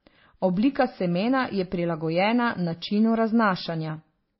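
Throughout, the speech was likely transcoded between lossy codecs, MP3 to WMA and back to MP3, so stacked artefacts smear together and nothing survives above 5.6 kHz.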